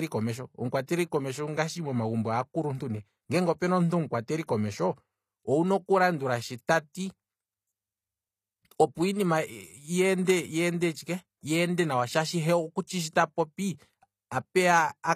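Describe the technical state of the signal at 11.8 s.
HE-AAC compression damage is plainly audible at 11.8 s, as it is across the whole clip. The treble is likely rebuilt by spectral band replication: lower bands are copied upward and shaped only by a coarse envelope, so the upper harmonics no longer line up with the speech beneath them. Sibilants come out gritty and lispy, the density of artefacts fits a bitrate around 24 kbps, and nothing sounds above 14.9 kHz.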